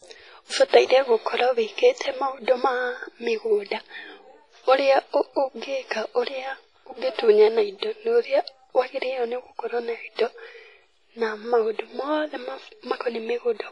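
Throughout the speech, heavy transform-codec damage, likely WMA compression at a low bitrate near 24 kbps, gives a ringing, washy sound with hiss that swells and fades with the voice. A spectrogram shows nothing above 10.6 kHz and patchy, zeroed gaps where weaker detail was discarded.

Pre-echo appears at 0.68 to 0.73 s, spreading about 49 ms, and again at 10.15 to 10.19 s, about 33 ms. The codec's noise, sized for a sharp attack, leaks into the quiet just before it. This is heard as a brief hiss ahead of a softened onset. A waveform shows a noisy smear leading into the transient.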